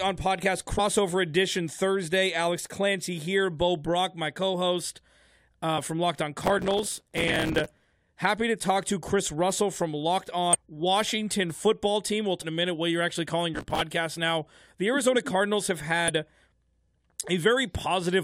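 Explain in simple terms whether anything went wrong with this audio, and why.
A few things went wrong here, of two kinds.

Damaged data in a compressed stream causes the short glitches at 0.78, 5.77, 10.53 to 10.55, 12.41 (just before "in a minute what") and 16.08 to 16.10 s. Bad bytes confuse the decoder, which loses its place and jumps ahead to the next intact chunk.

Processor overload crackle is the gritty tearing from 6.46 to 7.93 s, ending right before "happy to talk to", and again from 13.54 to 13.81 s, after "what you're actually calling". The processor kept missing its deadlines for tiny chunks of roughly 5 ms, about a hundred and fifty times in the first burst and a few dozen in the second. Each miss replayed a scrap of old audio.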